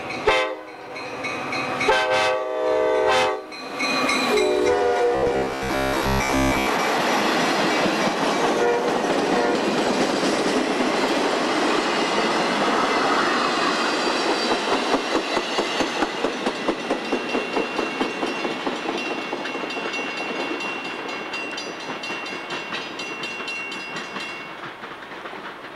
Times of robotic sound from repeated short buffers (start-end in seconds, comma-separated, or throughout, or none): 5.15-6.66